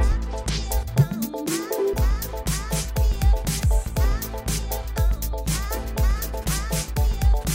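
Nothing stood out on listening; no technical problem could be heard anywhere in the audio.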